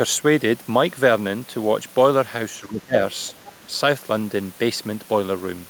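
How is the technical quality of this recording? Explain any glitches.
The recording has three echo-canceller glitches packed into about a second.

From 2.6 to 2.95 s, and again from 3.56 to 3.71 s, the speech sinks by roughly 20 dB and then 15 dB. It's likely speech suppressed in double talk: the canceller couldn't separate the talker from the loudspeaker echo and turned everything down.

Between 3.45 and 3.55 s, a faint second voice sneaks in, around 25 dB below the talker, and brief. That's most likely the other side's voice leaking through, where far-end audio from the loudspeaker wasn't fully cancelled from the mic.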